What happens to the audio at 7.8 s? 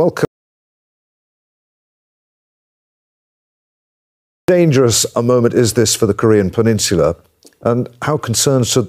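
Nothing goes wrong at 7.8 s; the speech carries on intact through that moment, with no dropout, click, distortion or other fault to be heard.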